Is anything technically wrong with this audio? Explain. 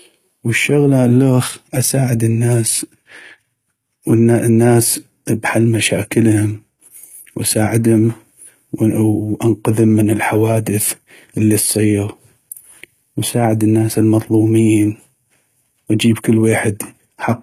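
Yes, this speech has plainly audible HE-AAC compression throughout, likely from a very low-bitrate stream, around 20 kbps. The treble is rebuilt by copying lower bands upward, so sibilants sound gritty and metallic, and nothing survives above about 14.9 kHz.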